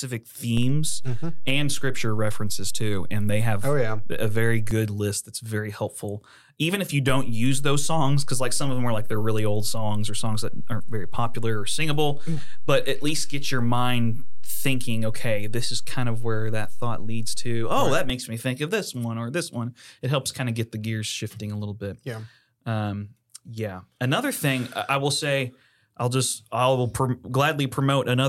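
At 0.57 s a DC step shifts the zero line by about -20 dBFS, with a low thump. It ends at 4.71 s, before "list that's very helpful". After "if you", at 7.09 s, a second step of about -19 dBFS thumps in. It lasts until 18.10 s, before "makes me think of". The speech continues unchanged.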